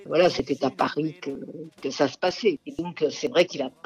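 Small, evenly spaced skips jump the sound forward at 0.40, 0.87, 1.35, 1.83, 2.31, 2.79 and 3.27 s, roughly every half second, each dropping a sliver of about 20 ms. This is likely audio missing between chunks, lost at each 0.5 s boundary.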